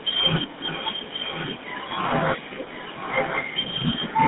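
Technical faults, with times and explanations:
Throughout: GSM full-rate codec. The sound has a buzzy, gravelly roughness and is confined to a band of roughly 150 Hz to 3.7 kHz. This fits a 13 kbps full-rate GSM coder, which models the vocal tract and rebuilds it from a coarse pulse excitation.
0.57–2.01 s and 3.96 s to the end: echo leak. A delayed copy of the speech returns about 1.05 s later, roughly 10 dB below the main signal in the first stretch and roughly 5 dB below in the second. The likely cause is a loudspeaker pickup that the far end's echo canceller failed to remove.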